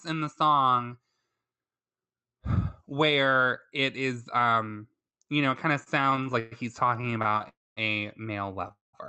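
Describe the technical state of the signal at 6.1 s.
At 6.1 s the jitter buffer keeps running dry as packets arrive late, producing repeated stalls (stutter) from 5.83 to 7.45 s. Each gap, up to 124 ms, is bridged by stretching the last sound, so nothing is lost but the speech drags and stutters.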